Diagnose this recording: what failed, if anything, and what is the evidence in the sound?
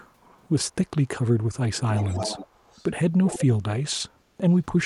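Echo leak at 1.92–2.85 s and 3.24–3.45 s: speech returns 296 ms late and quieter, likely a far-end loudspeaker's echo canceller failing in call processing.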